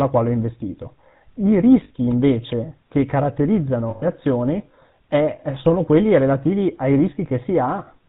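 Throughout the speech, the band stops sharply at 4 kHz and the voice has a buzzy, gravelly grain. This points to the GSM full-rate codec at 13 kbps. It rebuilds speech from a vocal-tract filter driven by sparse, evenly spaced excitation pulses, so fine detail is replaced by a coarse rasp. On a spectrogram there is an empty region above 4 kHz, and the harmonics look smeared and grainy rather than cleanly striped.

At 1.84 s, just after "quale ho investito I", lost GSM frames leave a 60 ms stretch, which fits three 20 ms frames, ending around 1.91 s. The decoder repeats the last good frame's settings, so the sound freezes into a short metallic ring. On a spectrogram this shows as a static, banded block with no movement in the formants.

At 2.11 s comes a sharp snap, a brief electrical switching spike, likely from a nearby switch or static discharge arcing into the line. The waveform shows a near-vertical spike, and the spectrogram shows a thin vertical line across the whole 4 kHz band.

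At 3.90 s a longer gap of lost GSM frames lasts 120 ms, about six frames' worth. It ends at 4.06 s, just before "azioni è". The repeated frame rings metallically, and on screen it appears as a flat smear.

At 5.59 s a second switching spike lands between "azioni è" and "quelli relativi ai". It is seen as another full-height line.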